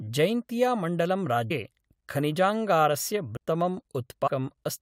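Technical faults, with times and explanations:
1.50, 3.36 and 4.26–4.28 s: compressed frames skipped. The audio jumps ahead roughly 0.1, 0.3 and 0.3 s, which fits whole ~23 ms frames being dropped.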